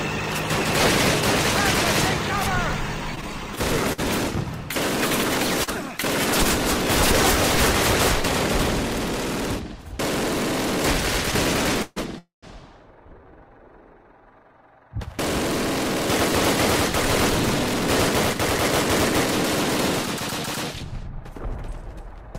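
Packets kept reaching the receiver late between 3.15 and 4.00 s, so its jitter buffer ran dry four times and the last sound was extended each time. This is a repeated stall, or stutter: about 96 ms of filler, the longest piece 52 ms, roughly 11% of that stretch, makes the audio drag and hitch with nothing lost. At 5.64 s a single late packet left the buffer empty again, a short stall from a late packet: the sound is held about 35 ms too long, with a faint buzz or dip, before continuing where it left off. From 11.82 to 11.98 s and again from 12.18 to 12.45 s the audio freezes into a held, fading buzz or hiss, call audio freezes that were likely caused by packets being held up in transit. The first lasts about 139 ms with no silence; the second lasts about 243 ms and decays to roughly 150 ms of silence. Each inserts a gap and pushes the audio later without dropping any of it. From 20.71 to 22.37 s the buffer had built up more audio than it targets, so the receiver performed a jitter buffer speed-up, repeatedly cutting pitch-period-sized slivers totalling around a tenth of a second. 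The sound plays at 105% speed at unchanged pitch and comes across as slightly hurried.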